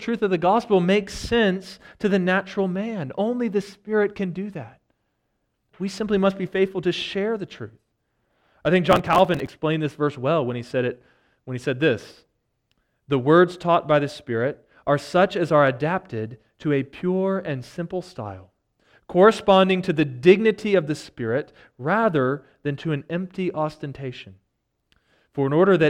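From 8.90 s to 9.50 s the speech breaks into processor overload crackle, a gritty tearing that rides on top of the sound for about 0.6 s and then stops. The audio engine fell behind and missed a long run of its buffer deadlines, and each missed buffer was simply skipped, leaving a short hard-edged gap. The gaps are each a few milliseconds, consistent with buffers of roughly 5 ms, and several dozen of them in quick succession fuse into the crackle.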